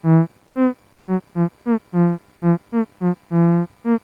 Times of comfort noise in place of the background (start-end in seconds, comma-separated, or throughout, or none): 0.47-0.55